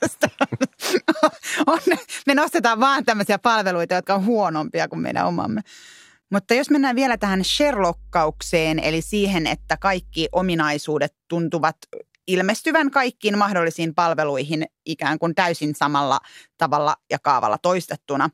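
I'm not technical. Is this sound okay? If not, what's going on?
No. Mains hum runs from 7.13 to 10.53 s, starting just after "jos mennään": a steady low 50 Hz drone sits under the speech. Electricity from the power supply leaked into the recording, likely through a grounding problem or nearby transformer.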